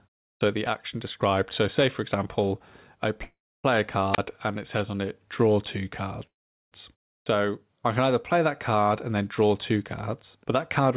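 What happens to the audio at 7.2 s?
At 7.20 s there's a clipped start after a pause. The sound coming back after a short gap of about 0.32 s loses its first 67 ms or so, through 7.26 s, because the output side drifted into a sleep state during the gap and needed that long to wake and lock again. You hear "I can either play" snap in abruptly from silence, missing its opening sounds, with no natural onset.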